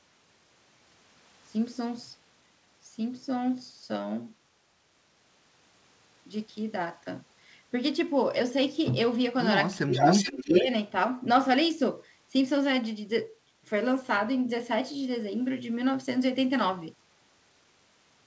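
From 9.91 to 10.66 s, a delayed copy of the speech about 433 ms behind, about 5 dB louder than the original, is an echo leak, likely from a loudspeaker's echo canceller letting pickup through. Overlapping it, from 10.31 to 10.68 s, the talker dips by around 10 dB in patches totalling roughly a fifth of a second: speech suppressed in double talk, likely the canceller turning down both its own talker and the echo.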